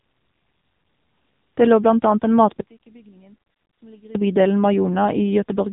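From start to finish the speech carries the sound of the AMR narrowband mobile codec. Nothing survives above about 3.8 kHz, so the voice is dull and boxed-in, and the damage is heavy. Vowels take on a buzzy, synthetic edge as the vocal-tract model rebuilds each 5 ms from a handful of pulses. That degree of coarseness points to a low bitrate in the region of 6.7 kbps.

From 2.61 s to 4.15 s, between "lå blant annet en" and "i bydelen", the speech collapses by about 28 dB to a faint residue and then returns at full level. This is most consistent with one channel inverted, likely caused by a polarity flip on one side of a stereo pair that was then summed to mono. The centred voice is common to both channels, so it cancels, and only the small difference between the channels remains audible.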